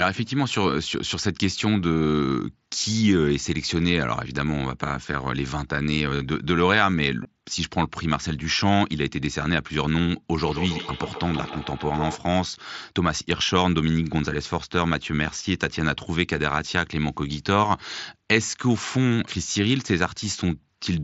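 At 7.23 s there is a brief concealed Bluetooth headset packet loss, about 15 ms, which fits two lost packets on the headset link. The receiver fills the gap by repeating a closely matching slice of the preceding waveform.

From 10.3 to 12.28 s a feedback echo between two devices appears. A second device in the room replays the call audio, the microphone picks it up again, and the local echo canceller cannot remove it. The sound returns at a spacing of roughly 150 ms, peaking at about 11 dB below the speech.

At 19.53 to 19.55 s a second concealed packet loss of 22.5 ms occurs, consistent with three lost packets. This one is long enough for the repeated fill to sound buzzy before the real signal resumes. Around it, the mSBC wideband coding shows its usual light graininess.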